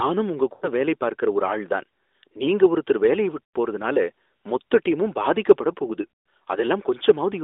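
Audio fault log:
0.54–0.69 s, 3.44–3.56 s, 6.02–6.07 s: lost AMR speech frames. These occur just before "வேலை பார்க்கற ஒரு ஆள்", after "தான் நீங்க ஒருத்தர் வேலைய" and after "மொத்த டீமும் பாதிக்கப்படப்". The decoder repeats the last good pitch and vocal-tract settings at falling gain, so the sound smears and fades instead of cutting to a clean gap. About 80 ms and 100 ms are lost in the first two. In the third, 200 ms is lost over 240 ms, with a 140 ms run that sags nearly to silence.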